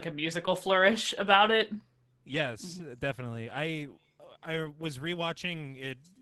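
No faults are audible in the speech; the top end stops at about 12 kHz, consistent with a call codec running at its normal settings, and its usual coding texture holds steady throughout.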